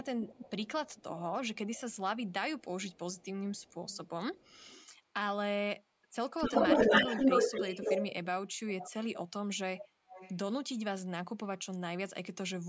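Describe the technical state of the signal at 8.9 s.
A fainter copy of the speech, 250 ms late, sounds from 8.79 to 8.91 s: an echo leak, likely loudspeaker pickup that an echo canceller missed.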